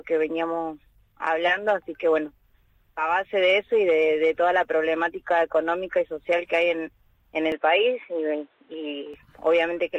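From 7.52 to 9.14 s the sound abruptly narrows, with nothing above 4 kHz and a faint new noise floor, likely an input switched to a poorer device.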